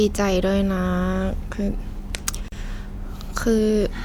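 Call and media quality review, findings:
Gap at a join of encoded pieces, speech, 2.48 to 2.52 s: 38 ms dropout mid-phrase, speech resumes where it stopped. Separately encoded segments concatenated untrimmed; encoder delay plus final-frame padding left in. Waveform: flat notch, smeared edges. Spectrogram: full-band vertical blank stripe.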